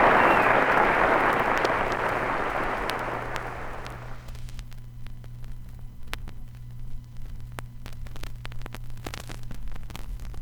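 Nothing stood out as a technical problem on listening to this recording of sounds.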